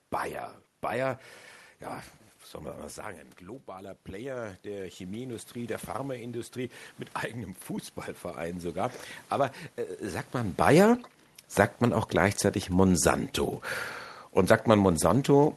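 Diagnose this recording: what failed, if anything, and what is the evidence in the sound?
Automatic gain rising in call processing: after "man mal sagen ein", from 3.39 to 7.62 s, voice and room noise swell together by about 10 dB, unlike a talker moving closer.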